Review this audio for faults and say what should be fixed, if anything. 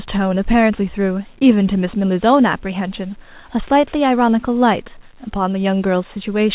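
Nothing to fix in this speech clip; the band stops at 4 kHz as expected of a narrowband telephone-grade call path, and no faults are present.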